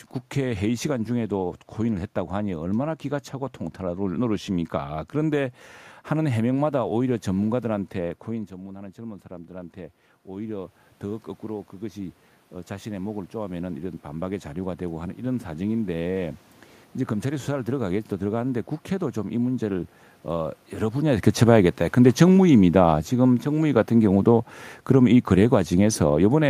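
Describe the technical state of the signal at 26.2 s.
At 26.2 s the automatic gain is falling. This runs from 21.3 s to the end of the clip. The gain control judged the input too loud, or its background noise too strong, and is pulling its level down step by step. The speech and the room noise sink together.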